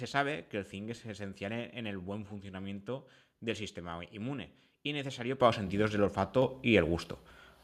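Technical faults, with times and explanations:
5.4 s and 6.42 s, microphone volume stepped up: input gain jumps about 8 dB, then about 4 dB, lifting speech and background together instantly, not gradually as when a talker moves closer.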